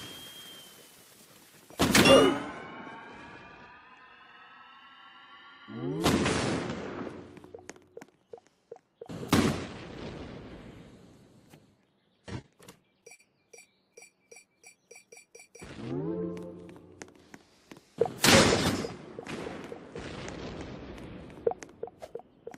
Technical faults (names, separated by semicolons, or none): repeated stalls (stutter); jitter buffer slow-down